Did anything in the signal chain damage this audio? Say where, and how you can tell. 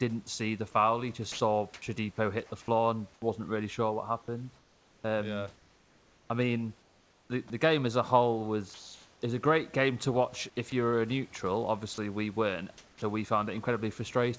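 Yes, the damage sits in the call-processing stage, where the sender's voice detector gates transmission.

Sound dropped by the voice detector: from 1.32 to 1.40 s, 80 ms of real signal vanishes and a flat hiss takes its place. On a waveform the envelope collapses to a thin, even band. On a spectrogram the speech harmonics stop abruptly and give way to smooth, structureless noise. The likely cause is the detector misreading quiet speech as background and halting transmission.

Comfort noise in place of the background: between 1.32 and 1.82 s, and again from 3.14 to 3.22 s, the room's natural texture is replaced by synthetic, spectrally smoothed noise. In the second span it sits about 7 dB below the surrounding background. A spectrogram shows a uniform grey wash with no fine detail, and the waveform shows a steady, lower floor. This is likely discontinuous transmission: the receiver generates filler while the sender is silent.

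Onset clipped by the voice detector: at 3.20 to 3.22 s the returning sound lacks its first 20 ms and starts hard out of the comfort noise. On the waveform the amplitude jumps straight to full level with no rising edge. On the spectrogram the first formant column begins as a sharp vertical wall. The detector was likely slow to reopen, so the soft beginning was never sent.

Sound chopped by the voice detector: across 4.58 to 9.22 s the gate likely flips repeatedly, replacing about 2.2 s in total. From 10.70 to 13.02 s it does the same more briefly, for about 0.3 s. The waveform shows speech broken by repeated flat patches, and the spectrogram alternates between harmonic streaks and featureless noise blocks. The result is choppy speech. The G.722 path shows its expected empty band above 8 kHz throughout.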